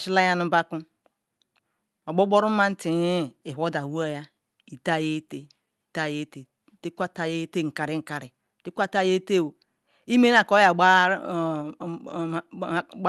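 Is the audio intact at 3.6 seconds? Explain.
Yes, at 3.6 seconds the speech is intact, with no dropout, glitch or distortion at that moment.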